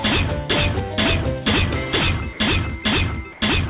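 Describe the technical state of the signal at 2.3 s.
Right around 2.33 s the sound cuts out for about 60 ms, until 2.39 s, and a flat, steady hiss fills the gap before the signal picks up again. That's most likely sound dropped by the voice detector: the sending side judged that stretch to be background, stopped transmitting, and the receiver slotted in comfort noise until the detector fired again. Around it you can hear the call path's narrowband character, with nothing above 4 kHz.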